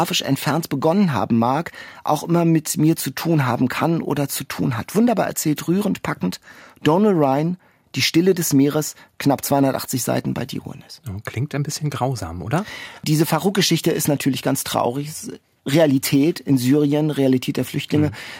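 No audible technical faults were found anywhere in the speech.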